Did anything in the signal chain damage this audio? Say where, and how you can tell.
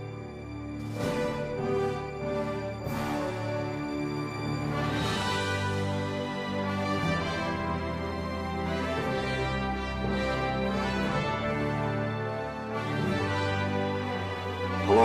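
No, nothing in the signal chain damaged this audio.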